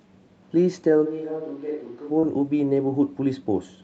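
A switch to a distant microphone runs from 1.07 to 2.09 s: the speech suddenly turns roomy and hollow, loses bass and drops roughly 10 dB, with room noise rising to about 30 dB below the speech. The likely cause is the close microphone's feed dropping out, leaving a farther pickup.

Short concealed packet loss follows from 2.19 to 2.26 s. About 40 ms of audio failed to arrive in time, and the receiver covered 35 ms of it by extending the preceding sound before blending back, heard as a brief smear.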